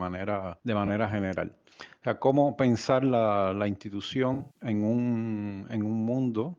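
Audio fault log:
0.86–0.89 s, AAC frame loss with concealment: a brief smeared, noisy blip lasting about 21 ms, consistent with a single lost frame. The decoder patched the gap by reusing the previous spectrum with altered phase. On a spectrogram it appears as a thin vertical band of blurred, grainy energy, with little visible in the waveform.
4.33–4.62 s, AAC frame loss with concealment: about 192 ms of missing audio scattered across roughly 213 ms, pointing to several lost frames. The longest gap runs about 150 ms. Repeatedly rebuilding from stale spectra makes this stretch sound phasey and washed out. A spectrogram shows smeared, noise-like patches in place of clear structure, and the waveform envelope looks uneven.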